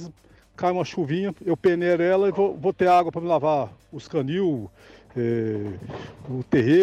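At 5.66 s a sharp click signals dropped samples: likely a fraction of a millisecond went missing, so the waveform jumps. Unlike a dropout, no sound disappears.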